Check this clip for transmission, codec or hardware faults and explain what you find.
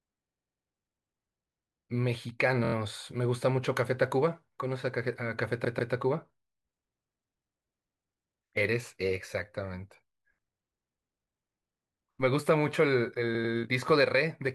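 The speech stutters four times as a short slice replays: 0.29–0.67 s (96 ms, four extra plays), 2.64–2.74 s (24 ms, four extra), 5.64–5.93 s (144 ms, two extra) and 13.35–13.54 s (96 ms, two extra). These are repeated frames, compressed blocks decoded again and lengthening the audio each time.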